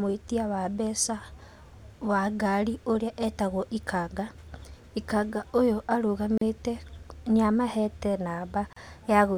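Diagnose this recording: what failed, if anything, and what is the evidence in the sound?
The failure is at the codec stage: gaps at joins of encoded pieces. The speech drops to silence from 6.38 to 6.41 s (about 37 ms) and from 8.73 to 8.76 s (36 ms), with slightly smeared edges, then resumes where it stopped. Separately encoded segments were joined without trimming encoder delay and final-frame padding.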